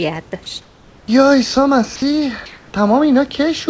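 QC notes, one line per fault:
0.62–1.08 s and 2.46–2.74 s, comfort noise in place of the background: the room background, about 30 dB below the loud parts, turns into steady, featureless hiss, about 4 dB quieter the first time and about 1 dB louder the second. The likely cause is discontinuous transmission with synthesized fill. A spectrogram shows smooth, textureless noise that stops at the 8 kHz band edge. The waveform shows an even, flat noise floor.
1.96 s, sound dropped by the voice detector: about 60 ms of speech is lost and steady noise plays in its place, likely because the detector mistook a quiet stretch of speech for background. A spectrogram shows a brief gap in the speech energy filled by uniform noise. The waveform shows a short, flat dip in the speech.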